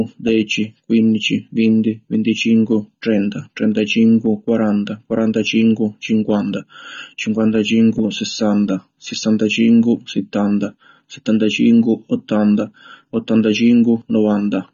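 From start to finish the speech is dull, with nothing above about 6.9 kHz, and the sibilants fizz and warble, which points to AAC compression, likely AAC-LC at a bitrate near 24 kbps. The warbling texture, not just the missing top, distinguishes it from simple low-pass filtering.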